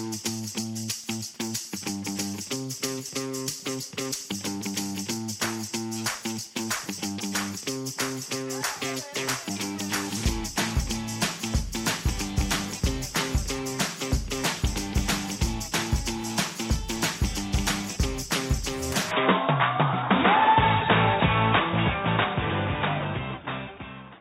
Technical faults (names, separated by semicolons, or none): input switched to a poorer device